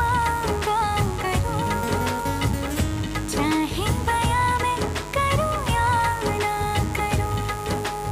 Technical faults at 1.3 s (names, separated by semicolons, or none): mains buzz